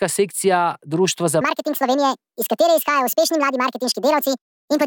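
From 1.41 s to the end, the speech suddenly turns high and hurried, rising about ten semitones. This is a section at the wrong speed, running 1.63 times too fast, likely from playback or editing locked to the wrong clock, so pitch and tempo shift together.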